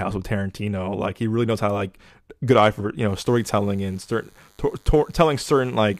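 DECT cordless phone buzz enters at 3.08 s, just after "good eye for you", and continues to the end of the clip. A DECT handset or base nearby is transmitting its short radio bursts every 10 ms, and something in the audio chain is rectifying that energy into the signal. The result is a thin, steady buzz at 100 Hz, rich in harmonics, sitting roughly 35 dB below the speech.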